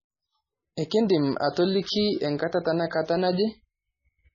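Throughout, the speech sounds watery and swirly, with nothing above 7.1 kHz. This is likely heavy MP3 compression at a very low bitrate, about 16 kbps.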